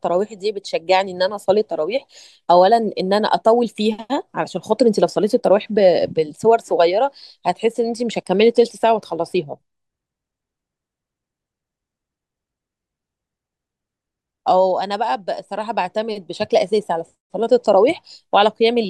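A speech recording, with nothing technically wrong with it.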